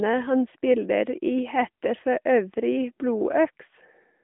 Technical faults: none

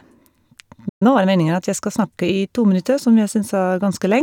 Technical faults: playback stall; time-compressed catch-up

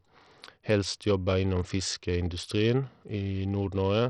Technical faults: Bluetooth SBC compression

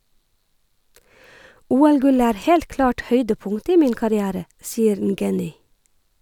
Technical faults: none

